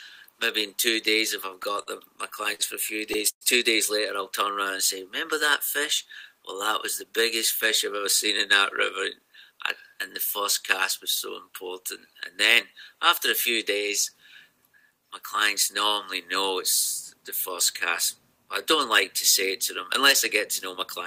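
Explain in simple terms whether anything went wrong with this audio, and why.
Repeated stalls (stutter) run from 1.49 to 3.43 s. The audio arrived late, so the player ran out nine times, stretching the last bit of sound to fill each wait, the longest about 110 ms. Nothing is lost, but the sound drags and hiccups.

A jitter buffer speed-up follows from 8.76 to 9.95 s. Too much audio had piled up waiting, so the player quietly snipped out tiny slices, around a twentieth of a second in total. The sound runs about 3% faster at unchanged pitch.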